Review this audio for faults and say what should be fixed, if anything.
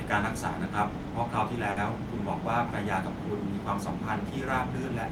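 A short stall from a late packet occurs at 1.71 to 1.78 s in this speech. A packet missed its playout deadline, the jitter buffer ran dry, and the receiver stretched the last sound for about 50 ms until the packet turned up. Playback then resumed from the same point, so nothing is lost, but the sound is held too long, with a slight buzz or dip, and everything after it runs 50 ms later than before. Preventing it means giving the jitter buffer enough depth, or adaptive sizing, to absorb arrival-time spikes of at least 50 ms.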